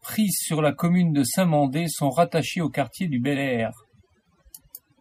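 Across the whole clip, overdone noise removal pulls individual frequency bands down whenever they sit close to the estimated noise floor, taking quiet parts of the speech with them. Pauses fall to near silence flecked with twinkling specks. Unlike a noise gate, the cuts are per band rather than whole-signal.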